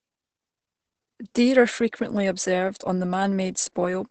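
The speech sounds muffled, hoarse and slightly robotic from start to finish, with nothing above about 8.7 kHz. This is heavy Opus voice compression: its linear-prediction coder keeps a wideband 8 kHz band and codes the excitation coarsely, which fits a bitrate of about 10 kbps.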